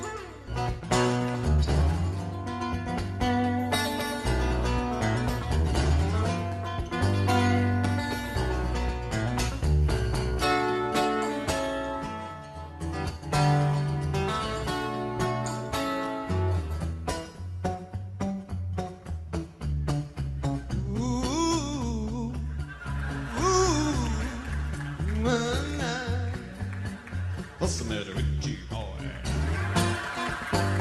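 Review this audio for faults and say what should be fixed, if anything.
Right at the start, around 0.47 s, there's a skip ahead: something like 0.4 s of audio just isn't there, and playback jumps straight to later material with no filler in between, so the two sides butt together almost seamlessly. That points to a chunk being dropped in transit or thrown out by an overflowing jitter buffer while newer audio was already queued. Sizing the jitter buffer with more headroom for bursty arrivals would prevent it.

Right after that, from 0.74 s to 1.98 s, there's a jitter buffer speed-up: the audio runs at about 107% with the pitch unchanged, so that stretch sounds a little rushed. The receiver was holding more audio than it wanted and trimmed out short pitch-period slices over and over, about a tenth of a second in total, to pull the delay back down. Smoothing packet delivery upstream so packets don't arrive in clumps would stop the buffer from having to catch up like this.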